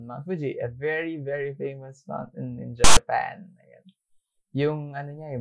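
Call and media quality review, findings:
Harsh static burst, 2.84 to 2.97 s, about 125 ms, hard edges both ends. Looks like file tags played as audio: a block of text metadata got fed to the decoder as sample data. Text bytes give that loud, lopsided rasp rather than flat noise. Probably the file parser or demuxer mis-locating where the audio starts.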